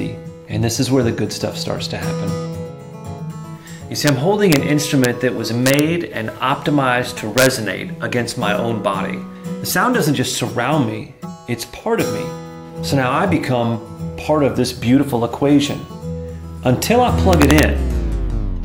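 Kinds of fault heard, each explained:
Integer overflow: a gain stage passed its integer limit and wrapped to the opposite sign, so six loud peaks crack violently, worst around 17.3 s.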